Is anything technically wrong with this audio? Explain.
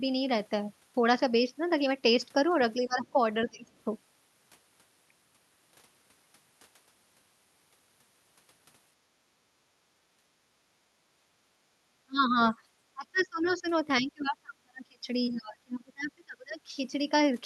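Yes. There are three kinds of echo-canceller fault in this speech clip.

Speech suppressed in double talk occurs at 2.82 to 3.67 s, 11.99 to 12.37 s, 12.94 to 13.66 s and 14.01 to 16.72 s. The likely cause is that the far end spoke over the talker, and the canceller could not tell the near voice from loudspeaker echo, so it turned everything down. The talker's speech dips or breaks up, by roughly 20 dB in the first stretch and as much as 35 dB later. The long final stretch loses about two seconds of level in pieces.

Background gated by the echo canceller happens at 9.23 to 10.48 s and again at 11.11 to 11.68 s. While the loudspeaker was playing, the canceller clamped down on the microphone path. The room tone drops by about 11 dB and then about 10 dB, for roughly a second and then about a third of a second, before the canceller releases and the ambience returns.

The other side's voice leaking through appears from 13.18 to 13.51 s, in the middle of one suppressed stretch. 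Some of the far end's audio likely survived cancellation and reached the microphone. It sits roughly 25 dB below the talker, as a faint scrap of a second voice.

All of this passed through an Opus call path, which limits the audio to about 12 kHz and adds its usual coding noise.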